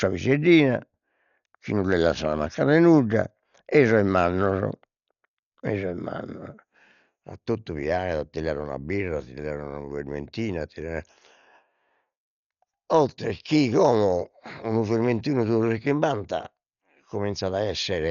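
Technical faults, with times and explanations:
Throughout: Dolby Digital compression, likely at a low bitrate around 48 kbps, has damaged the speech heavily. The band stops near 7 kHz, a flat ceiling on a spectrogram, and many frequency lines are replaced by dither noise, giving a dull, rough, fluttering haze around tones.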